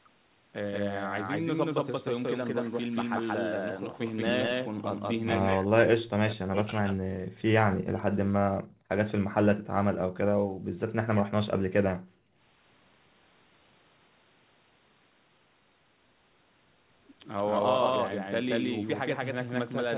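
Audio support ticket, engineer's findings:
Doubled audio track, start to end: second full-band copy about as loud as the original, trailing by around a fifth of a second. Dry, no room tail. Likely a slower capture path or an edit stacking two copies.

Speech suppressed in double talk, 5.53–7.38 s and 7.65–8.17 s: talker drops out deeply, by about 40 dB. Echo canceller couldn't separate near-end voice from loudspeaker echo, so it likely ducked both.

Background gated by the echo canceller, 8.48–8.88 s, 9.23–9.34 s, 10.08–10.18 s, 10.34–10.76 s and 11.93–12.43 s: room sound drops about 36–37 dB while the far end plays, then snaps back on release.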